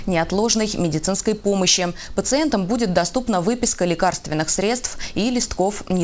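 No audible technical faults.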